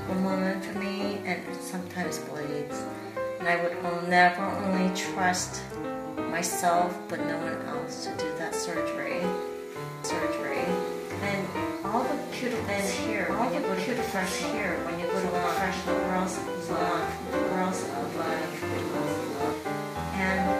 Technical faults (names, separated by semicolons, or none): doubled audio track